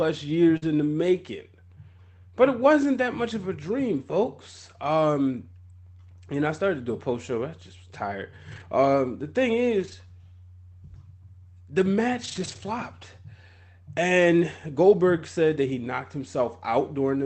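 Right at the start, from 0.57 to 0.64 s, there's a short concealed packet loss. About 40 ms of the call never made it to the decoder in time, so the receiver bridged the hole by stretching the preceding sound for around 43 ms before blending back into real audio. You hear a quick smear or wobble rather than a dropout. Overlapping its tail, from 0.62 to 0.64 s, is the first lost packet rebuilt from error correction, a 20 ms stretch.

That second fault keeps coming back. A lost packet gets rebuilt from the low-bitrate copy Opus tucks into the following packet, so there's no gap, but those stretches come out grainier and noisier than what's around them. After the first one, it hits at 4.10 to 4.12 s (20 ms), 8.52 to 8.62 s (60 ms, which fits three 20 ms packets), 9.80 to 9.94 s (80 ms), and 12.24 to 12.58 s (about 180 ms). All of this rides on an Opus call path limited to 8 kHz, so the top end is rolled off throughout.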